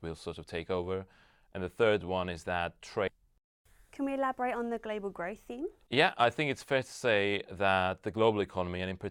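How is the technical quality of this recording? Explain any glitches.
The recording has one glitch: a stream segment skipped at 3.07 to 3.12 s, just after "third one is that". A segment of the stream likely failed to load and the player carried on with the next one, so part of the speech is missing. The sound jumps abruptly ahead, with a short blip at the join.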